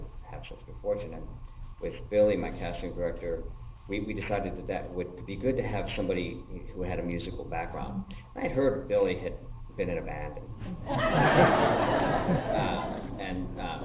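The audio has aliasing throughout. Content above 4 kHz folds back as wrong, unrelated pitches at about 25 dB below the signal, which fits an unfiltered drop from 48 kHz to 8 kHz.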